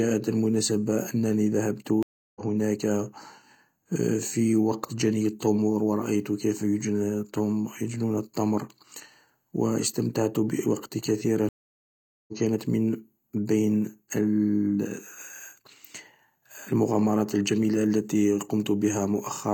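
At 2.03 s and again at 11.49 s, after "و استمتعت بوقتي" and before "كانت من", a stream reconnect cuts the speech to silence for 330 ms and then 791 ms. Each time the connection dropped and a fresh decoder restarted mid-stream, so the sound resumes roughly 0.3 s and 0.7 s further on, skipping material. On the waveform each gap is a flat line ending in a soft ramp. On the spectrogram it is an empty vertical band.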